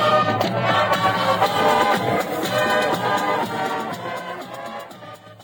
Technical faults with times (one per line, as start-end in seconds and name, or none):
none